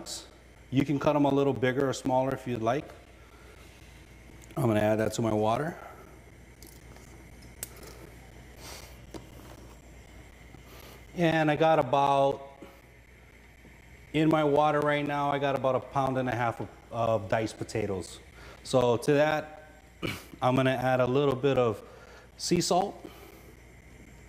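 From 0.05 s to 24.07 s there are periodic USB or driver dropouts every 0.25 s, about a hundred in all, each losing around 10 ms of audio replaced by silence. A recurring stall in the USB transfer or audio driver causes them, heard as evenly spaced ticks over the signal.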